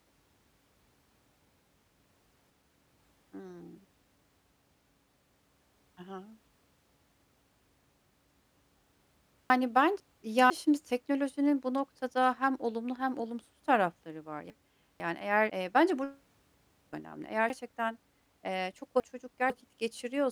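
Chunks out of order at 2.0–3.0 s, 9.5–10.5 s (just before "şimdi teknolojinin bu noktada"), 14.5–15.5 s (after "hem olumsuz tarafları var") and 17.5–19.5 s. A 500 ms chunk plays one slot late, and three slots late in the last case. The speech jumbles at the hard joins.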